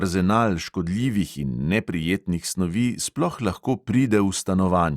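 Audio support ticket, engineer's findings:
No transport or processing faults found on this speech clip; signal path shows no dropouts, glitches, level jumps or timing errors.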